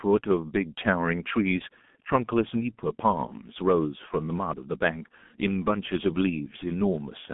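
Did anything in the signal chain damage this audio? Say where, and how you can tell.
Yes. A G.723.1 codec at the codec stage damages the speech throughout the clip. Nothing above 3.5 kHz or below 150 Hz survives, consonants smear, and the voice turns muffled and hoarse, which fits a bitrate near 6.3 kbit/s. Its coarse 30 ms frames re-estimate the voice model too slowly to follow fast articulation.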